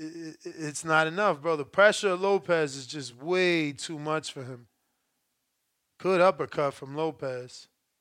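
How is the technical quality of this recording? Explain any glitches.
No technical glitches can be heard anywhere here.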